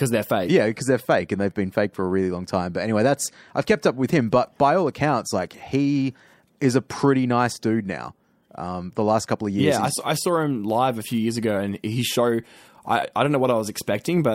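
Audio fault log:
4.31 s, pre-echo: Between "kept up with him" and "by all accounts like", a 15 ms hiss rises about 12 dB ahead of the attack. The codec spread its noise across a long block. This fits a 26 ms window with no short blocks.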